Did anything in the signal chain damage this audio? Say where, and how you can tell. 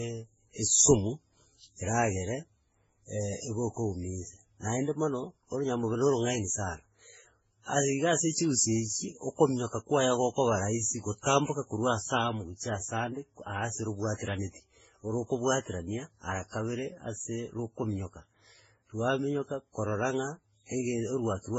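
Yes, at the codec stage. Throughout, nothing sits above 7.7 kHz and different artefacts stack. This is likely transcoding between lossy codecs, each re-encoding earlier damage.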